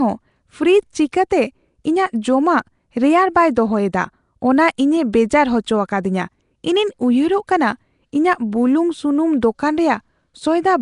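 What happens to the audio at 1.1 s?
Pre-echo at 1.12 s: a sharp attack lands late in a transform block, so quantisation noise scaled for the loud onset spreads back across the quiet moment before it, about 10 ms ahead, heard as a brief hiss leading into a softened, smeared attack.

Around it, the whole clip carries a rough, hissy halo and a smeared, underwater character with nothing above 10.6 kHz, plainly audible damage likely from Nellymoser compression, which fits a rate near 44 kbps; starved bands are filled with noise.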